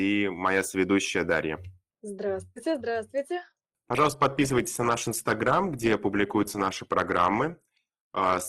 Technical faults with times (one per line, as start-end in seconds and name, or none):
3.56-8.48 adaptive stream at a lower bitrate